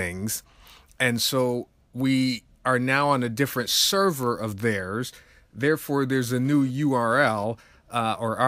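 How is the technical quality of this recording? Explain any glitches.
One glitch stands out: GSM phone buzz from 6.15 to 7.44 s. A nearby 2G phone's 217 Hz data bursts were rectified by the audio circuitry, producing a raspy, harmonic-rich buzz about 27 dB below the speech. Unlike steady mains hum, it stops and starts.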